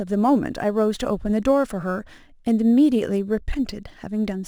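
Throughout the speech, crude rate conversion by unfiltered nearest-sample picking, consistent with 48 kHz to 44.1 kHz, adds an inharmonic fizz about 35 dB down.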